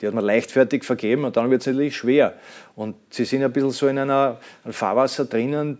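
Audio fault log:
No fault to log.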